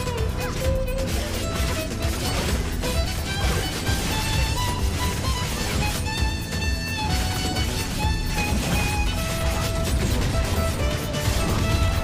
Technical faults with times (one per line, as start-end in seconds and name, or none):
none